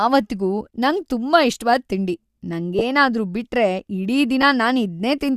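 A speech clip with two brief losses of LE Audio frames. At 2.79 to 2.82 s, just before "ಬಿಟ್ರೆ ಇಡೀ", a short noisy smear replaces the sound, which fits two 10 ms frames. At 4.42 s, right after "ಬಿಟ್ರೆ ಇಡೀ", a shorter smear fits one frame. In each gap the likely LC3 decoder repeats the last spectrum with scrambled signs.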